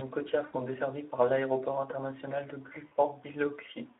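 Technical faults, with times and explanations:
Throughout, Speex codec: the speech sits in a narrow 300 to 3500 Hz line band, and at 11 kbps the excitation is coarse, so voices turn hoarse and noisy. Unlike a dropout, this damage is steady rather than tied to moments.
0.45 to 0.56 s, VoIP packet loss concealed by the speech codec: about 80 ms went missing just before "desservis par l'aéroport international", and the decoder stretched its last pitch and filter into a fading buzzy tone or coloured noise. The weak, smeared onset afterwards separates this from a clean gap or click.
2.87 to 2.93 s, VoIP packet loss concealed by the speech codec: right after "par l'aéroport international de", a shorter 40 ms loss gets the same treatment, a brief synthetic buzz or coloured noise that decays instead of silence, with the speech recovering weak or distorted as the decoder rebuilds its state.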